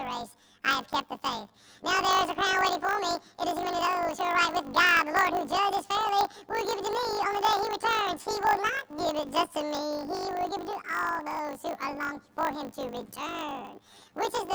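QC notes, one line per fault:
throughout: planar audio read as interleaved. The audio arrives in 20 ms blocks, each holding all of one channel's samples followed by all of the other's, but it is read as alternating left-right pairs. Each block is therefore played twice at double speed, first one channel's half and then the other's, so the pitch inside each block is raised 12 semitones while the overall pace stays correct. With blocks this short, the octave shift is hard to make out. Instead, the sound takes on a robotic buzz at the 50 Hz block rate.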